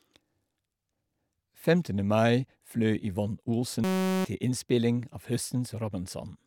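Speech, with a system hang loop from 3.84 to 4.25 s. A 5.33 ms slice repeats 76 times, giving a steady buzz at 188 Hz. The system stalled while the hardware kept replaying one buffer, which fits a 256-sample buffer. About 0.4 s of speech is lost.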